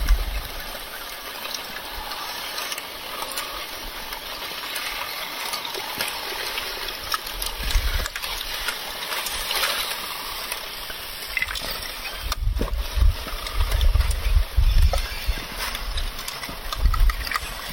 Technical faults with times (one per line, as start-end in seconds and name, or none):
1.17 compressed frames skipped
8.11 compressed frames skipped
12.53 compressed frames skipped